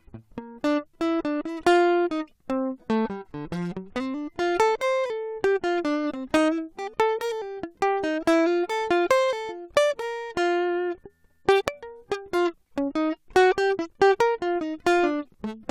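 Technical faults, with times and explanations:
6.10–6.12 s, stream segment skipped: the music jumps abruptly forward with a brief blip, likely because one stream segment failed to load and playback resumed at the next.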